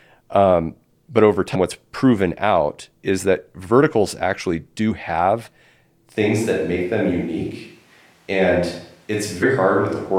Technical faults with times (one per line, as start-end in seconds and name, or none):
1.54-1.56 compressed frames skipped
4.90 compressed frames skipped
6.17-10.19 switch to a distant microphone
9.42 compressed frames skipped